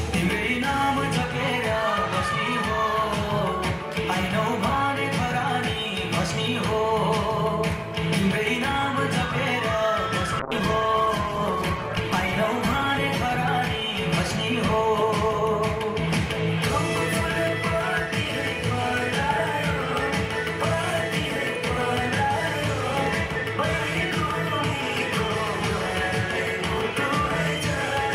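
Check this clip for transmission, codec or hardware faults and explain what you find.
One fault is present. A call bitrate drop runs from 10.4 to 16.83 s. The encoder starved of bits, suggesting roughly 12 kbps down from 128. The sound turns coarse and muffled, worst for about 1.6 s.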